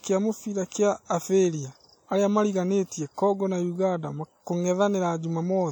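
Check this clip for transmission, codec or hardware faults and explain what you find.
There's one problem, and it runs through the whole speech clip: what sounds like WMA compression, plainly audible from start to finish. A transform codec like this works in long blocks, so its quantisation noise smears over tens of milliseconds and quiet spectral detail gets dropped. Here that gives a ringing, washy quality with hiss that breathes along with the speech. Content still reaches about 20.1 kHz, so the damage is more audible than the bandwidth suggests. That points to a low bitrate, likely from an early WMA encoder.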